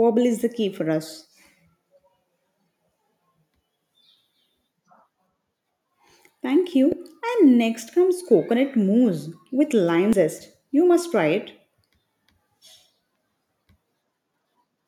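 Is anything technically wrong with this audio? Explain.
Yes. The speech has damaged data in a compressed stream at two moments, 6.92 s and 10.13 s. At each, part of the encoded bitstream is wrong, so the decoder misreads the affected frame, loses sync and has to hunt for the next valid frame header. Each is heard as a brief chirp or blip. On a waveform, each shows as an abrupt discontinuity. On a spectrogram, each is a thin vertical broadband smear that cuts across the speech harmonics.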